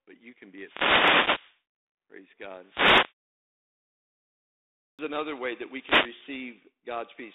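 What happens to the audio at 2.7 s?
A brief swish of static washes over the speech from 2.61 to 3.21 s. This is a wireless microphone noise hit: the analogue FM radio link fades as reflected signals cancel at the receiver, and its rising noise floor surfaces for about 0.6 s.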